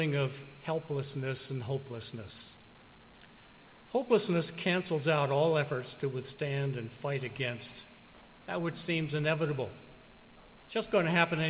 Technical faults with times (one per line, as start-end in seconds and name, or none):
none